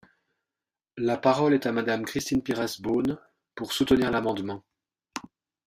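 From 2.19 s to 5.59 s, the speech is broken by periodic USB or driver dropouts. Every 54 ms, something stalls the driver and about 10 ms of audio is skipped outright. Dozens of evenly spaced ticks follow, forming a fast, rough rattle.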